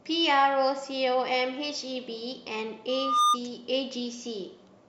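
Loudspeaker feedback squeal runs from 2.88 to 3.38 s: the microphone picks up its own loudspeaker, and at 1.2 kHz the loop gain passes one. A single tone swells over roughly a third of a second into a squeal about 10 dB above the speech.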